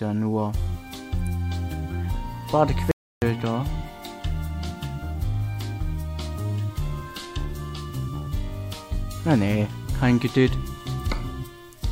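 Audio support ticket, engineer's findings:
Audio dropout to silence, 2.91 to 3.22 s. Sound cuts off abruptly and returns about 0.31 s later; the gap is silent, no room tone or noise floor underneath. Content in that stretch lost entirely. Likely cause: input briefly lost (loose or disconnected device, failed link, or momentary mute) while recorder kept writing silence. Check cabling/connection and any mute or gate on the input path.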